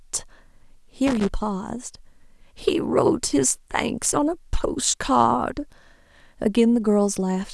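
At 1.07 s the speech is broken by loose connector crackle lasting until 1.29 s, and a shorter burst returns from 4.03 to 4.11 s. Both come from a worn or dirty contact in the signal path intermittently losing and regaining connection as it shifts. The signal is chopped into fragments, so each burst is heard as irregular scratching and crackle laid over the speech.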